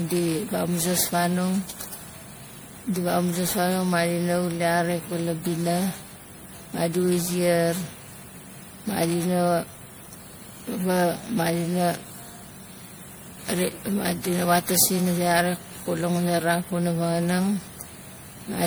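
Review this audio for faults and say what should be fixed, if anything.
Generation loss runs through the whole speech clip. The sound is swirly and hollow, with smeared consonant attacks, more damaged than a single encode at the rate it suggests, around 96 kbit/s MP3. That points to the likely cause: roughly ten decode-and-re-encode passes, each requantising on a shifted frame grid so the noise and spectral holes pile up. On a spectrogram, the upper bands show flickering gaps and blotchy patches below the 20.9 kHz ceiling, and onsets look blurred in the waveform. To prevent it, keep a lossless master for editing and encode to MP3 only once, at the final export.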